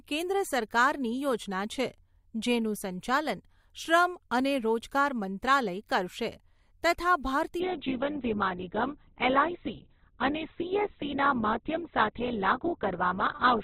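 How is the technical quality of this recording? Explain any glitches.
Quality drops partway through the speech. From 7.60 s, an adaptive stream at a lower bitrate switches suddenly, without a gap, to a low-rate version. The audio turns muffled with more codec artefacts, and the spectrogram abruptly empties above 4.1 kHz.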